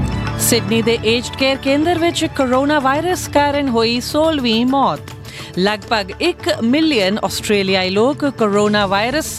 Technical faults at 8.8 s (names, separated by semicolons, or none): none